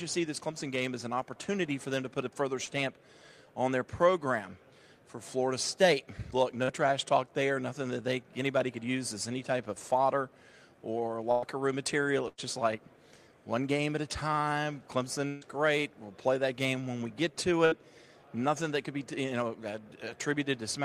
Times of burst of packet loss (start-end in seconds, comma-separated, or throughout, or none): 11.31-11.44, 12.28-12.40, 15.28-15.43, 17.65-17.74